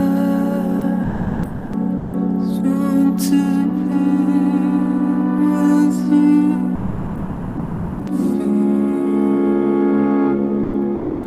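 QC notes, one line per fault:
0.79 s (20 ms), 1.03–1.73 s, 1.97–2.13 s, 6.75–8.07 s, 10.63–10.73 s and 10.95–11.23 s: sound dropped by the voice detector. The sender's detector most likely judged the signal to be background, stopped transmitting, and the receiver filled in with comfort noise, which fits Opus DTX. The sound itself is replaced for 20, 700, 160, 1320, 100 and 280 ms. Each time it gives way to steady noise or near silence and returns when the detector triggers again.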